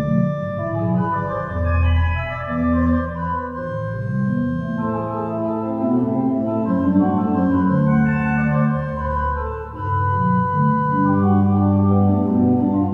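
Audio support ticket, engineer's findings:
Nothing to flag here: listened through the whole clip and didn't hear any fault worth raising on the ticket.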